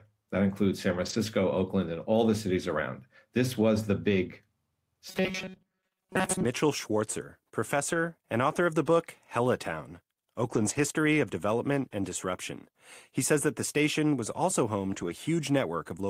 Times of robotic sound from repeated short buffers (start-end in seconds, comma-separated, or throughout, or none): 5.09-6.45